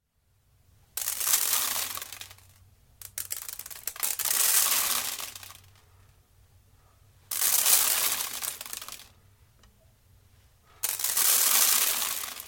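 From 2.01 to 2.06 s, frames out of order: two adjacent 23 ms blocks play swapped, giving a brief garbled flutter; unlike a skip or dropout, no time goes missing.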